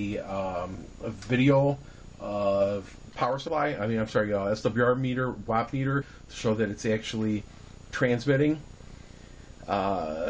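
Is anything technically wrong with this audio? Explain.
Yes. Compressed frames are skipped three times: at 0.73 s, from 3.47 to 3.49 s, and from 6.00 to 6.02 s. Whole blocks of encoded audio never reach the output. The sound jumps forward by about 50 ms at the first two points and about 100 ms at the third. That fits two and then four lost frames of 23.2 ms. At each join the audio cuts abruptly ahead.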